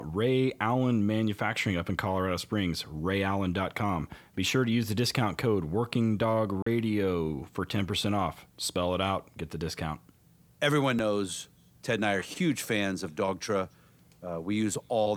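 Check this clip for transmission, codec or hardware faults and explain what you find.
One fault is present in this speech: from 6.62 to 6.67 s the audio drops to 40 ms of silence, then resumes. This is likely a Bluetooth stall, where delayed wireless packets let the receiver's buffer run empty until retransmissions arrived.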